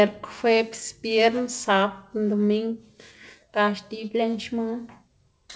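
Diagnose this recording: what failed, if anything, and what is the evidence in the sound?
Nothing failed: the speech stops at 8 kHz, which fits a wideband call codec such as G.722 on a normally working WebRTC path, and no stage from capture to playback shows a defect.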